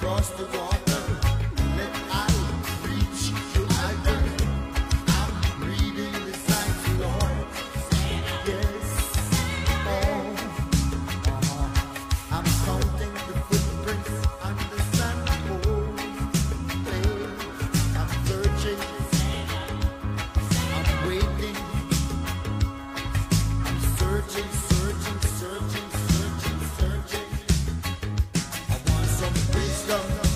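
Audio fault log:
2.43 to 8.43 s, adaptive stream at a lower bitrate: The sound quality drops suddenly, with no gap. Nothing is heard above 14.9 kHz in this stretch. The high end sounds thin and smeared, and codec artefacts grow. The player switched to a leaner version of the stream when the connection slowed. The change fits a move from a mid-rate AAC stream to a low-rate HE-AAC one. At 8.43 s the fuller sound returns just as abruptly.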